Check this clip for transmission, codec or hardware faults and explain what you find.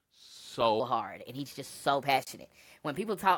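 One fault is present. From 0.8 s to the end, a section at the wrong speed runs 1.24 times fast, likely a clock mismatch; the speech sounds hurried and about four semitones higher.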